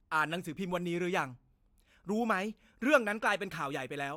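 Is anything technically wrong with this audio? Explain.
No, nothing stood out as technically wrong on listening to this speech recording.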